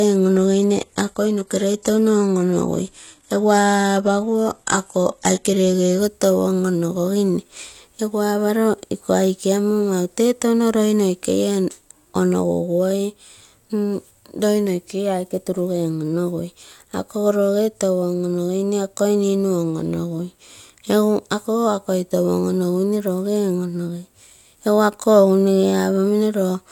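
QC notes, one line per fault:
0.0 to 6.0 s, adaptive stream starting at a low bitrate: the opening speech is thin and swirly, with treble that sounds synthetic rather than real. That fits the player starting on a very lean HE-AAC rendition, around 16 kbit/s, so playback could begin quickly. At 6.0 s it suddenly steps up to a much cleaner AAC-LC version, about 96 kbit/s by the sound of it, with no gap. Nothing comes through above 12.3 kHz.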